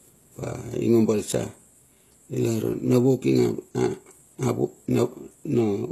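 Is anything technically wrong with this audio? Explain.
Yes. Across the whole speech clip there's plainly audible codec damage, and it sounds like HE-AAC compression, likely at a low rate in the region of 16 kbps. The treble above the lower band is rebuilt by copying lower content upward under a coarse envelope, so the highs sound synthetic, with sibilants going gritty or lispy because their harmonics don't line up across the crossover. Everything stops dead above about 12.3 kHz.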